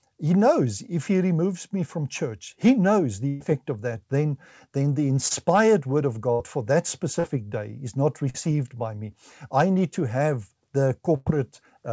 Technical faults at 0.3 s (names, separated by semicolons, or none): none